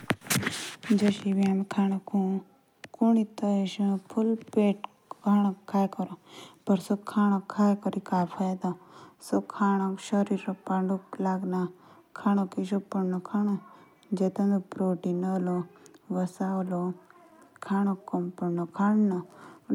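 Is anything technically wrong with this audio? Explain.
No, nothing technically wrong turns up anywhere in this speech recording, so there's nothing here to flag or explain.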